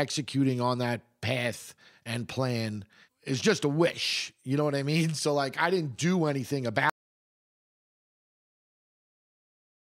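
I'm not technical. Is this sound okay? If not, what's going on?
No. An audio dropout to silence starts at 6.9 s, right after "I didn't do anything", and lasts to the end: the input was likely lost, leaving total silence.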